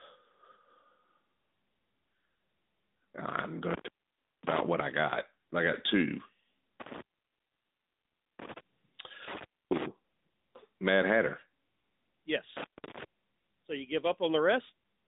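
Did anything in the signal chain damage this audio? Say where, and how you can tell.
Yes. At the codec stage, the whole clip has been through the AMR narrowband mobile codec. The speech sits in a band from about 200 Hz to 3.7 kHz and sounds plainly buzzy and synthetic. That fits a bitrate around 10 kbps. A simple low-pass filter would dull the sound but would not add this vocoder coloration.

In the analogue wiring, an intermittent contact cuts the line four times: 3.71–4.61 s, 6.80–8.58 s, 9.28–9.86 s and 12.57–13.03 s. The line stays open for about 0.56, 1.39, 0.28 and 0.32 s. Each break has crackle at its edges and faint hiss inside, which separates it from network packet loss, where gaps are clean or concealed.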